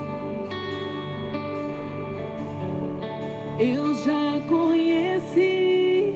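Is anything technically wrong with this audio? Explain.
No, nothing is technically wrong with this audio.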